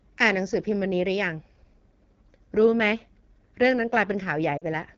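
Throughout, the speech carries the rough, raspy texture of the AMR wideband (HD Voice) codec at a low rate, which fits 8.85 kbit/s, where the vocal tract model is coarsely coded. From 4.57 to 4.64 s, lost AMR speech frames cause about 40 ms of concealment, consistent with two consecutive 20 ms frames. The decoder repeats the last pitch and spectral settings at falling gain, so the sound smears and dips briefly before recovering roughly.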